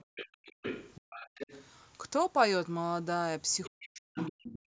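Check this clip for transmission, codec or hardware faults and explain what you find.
Three echo-canceller faults turn up in this speech clip, all bunched near the start and the end.

Other side's voice leaking through, at 0.00–0.28 s, 0.45–1.66 s, 3.64–3.89 s and 4.18–4.59 s: a second voice sits under the talker. It's most likely loudspeaker playback the canceller didn't fully subtract. It's around 10 dB down early, about 20 dB down near 3.7 s, and only about 5 dB down at the end, which makes that last stretch the most obvious.

Background gated by the echo canceller, from 0.05 to 0.54 s and again from 4.59 s to the end: the room tone gets clamped by as much as about 40 dB while the loudspeaker is active. Early on, it comes and goes over roughly a third of a second in total. At the end, it only lasts about a tenth of a second. You hear the background dip to near silence and then come back.

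Speech suppressed in double talk, from 3.69 to 4.18 s: here the talker's own voice dips, by up to around 40 dB, while the leaked voice is also present. The likely cause is that the canceller couldn't tell the talker from the echo and turned both down.

The band stopping at 8 kHz is just the call's normal microphone path.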